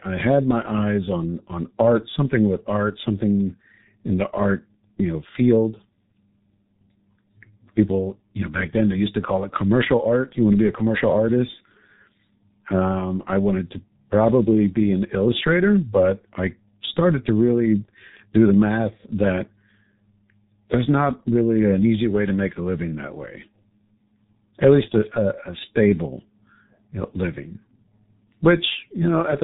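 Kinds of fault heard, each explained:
G.723.1 codec: heavy low-bitrate telephony coding fitting about 6.3 kbit/s; nothing above 3.8 kHz, with hoarse, smeared consonants that plain low-pass filtering wouldn't cause.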